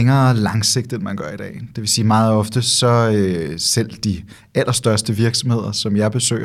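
No technical faults are audible.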